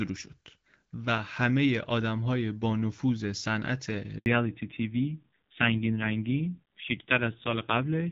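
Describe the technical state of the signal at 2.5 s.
At 2.5 s the speech is intact, with no fault at that moment, carried through the AMR wideband (HD Voice) codec at 12.65 kbit/s.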